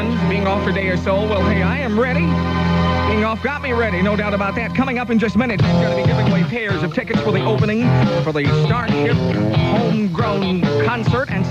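Listening to the whole recording, nothing in the audio stood out as a technical problem.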